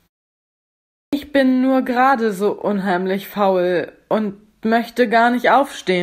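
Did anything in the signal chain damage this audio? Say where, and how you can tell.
Yes. At 1.05 s, after 1.05 s of silence, the speech starts abruptly with its first sounds missing until 1.13 s, about 77 ms lost. This is a clipped start after a pause at playback: the output device slept through the silence and needed that long to wake.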